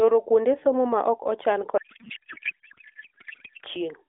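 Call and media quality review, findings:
Codec payload misread, 1.78 to 3.64 s, right after "somo ma ok ochan". Speech replaced by garbled noise and warble that barely tracks it. AMR-NB frames decoded with fields in wrong places, which fits octet-aligned packing read as bandwidth-efficient.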